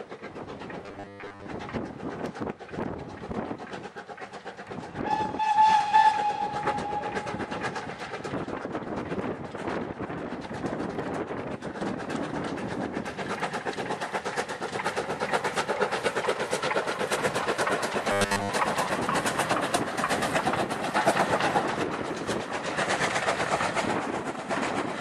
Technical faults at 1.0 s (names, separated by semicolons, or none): robotic sound from repeated short buffers